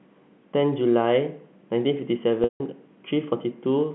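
It's a short speech clip carried over a G.711 telephone line, with the usual narrow 150 Hz to 3.4 kHz band. At 2.44 s there's packet loss with pitch repetition. About 160 ms of audio goes missing, which fits eight 20 ms packets, until 2.60 s. The receiver fills the hole by looping the last pitch period, so you get a brief buzzy, held tone. It fades to silence before the speech cross-fades back in.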